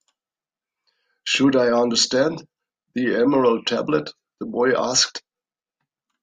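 From 0.12 s to 6.10 s, faint, evenly spaced ticks run under the speech, around forty of them, roughly one every 0.15 s. These clock slip clicks likely come from two unsynchronised clocks about 150 ppm apart, with each slip dropping or repeating one sample.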